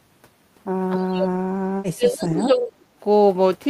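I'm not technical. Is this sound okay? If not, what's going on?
No. Between 0.96 and 3.02 seconds there is likely speech suppressed in double talk: both sides spoke at once, and the call's echo filter mistook this voice for echo and turned it down. For about a second and a half in total, the voice dips until nearly silent.

From 2.21 to 2.43 seconds there is likely an echo leak: the other side's loudspeaker was picked up by their microphone and not fully removed. A faint copy of the voice returns about 0.29 seconds late, much quieter than the original.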